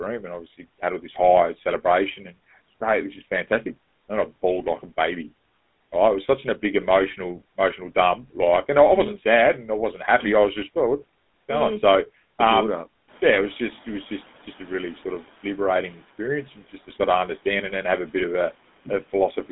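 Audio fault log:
Throughout, GSM full-rate codec. The sound has a plainly buzzy, gravelly roughness from pulse-driven vocal tract modelling. Its band runs from about 200 Hz to 3.6 kHz, with nothing above 3.8 kHz. This fits a 13 kbps full-rate stream.
13.07 to 15.64 s, noise suppressor catching up. Room noise jumps about 12 dB around 13 s, and the suppressor's noise estimate lags. The noise at first passes with little reduction. It then sinks about 9 dB over 2.57 s, settling just before "experience and just to".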